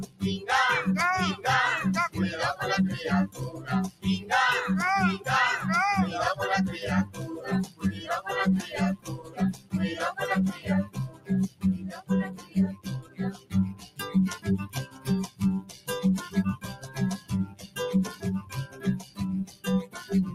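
Throughout, a noise suppressor applied to these sounds, built for speech, mistakes steady material for noise, so the level pumps by about 15 dB. Unlike a dropout, attacks survive. At 0.04–0.22 s, 3.28–4.3 s, 7.06–8.07 s, 8.97–9.73 s, 10.53–15.89 s and 16.57–19.97 s, sound is cut by the noise suppressor, sinking by about 14 to 15 dB. Held tones and decays thin or sink for stretches of about 0.2 to 3 seconds, while sharp onsets mostly come through.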